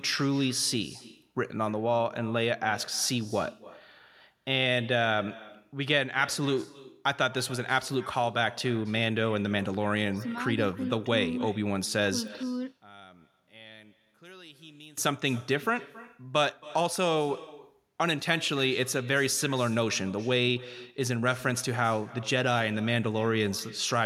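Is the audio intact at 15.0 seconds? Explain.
No. An echo with no canceller runs through the whole clip. The far end's loudspeaker feeds its microphone, and nothing removes that. So every phrase returns roughly a third of a second later. It is about 20 dB quieter and thin.

Right up to that moment, from 12.43 to 14.97 s, the sound drops by about 23 dB and turns faint. One channel inverted is the likely cause. Its reversed polarity cancels the shared centre content when the channels are summed to mono.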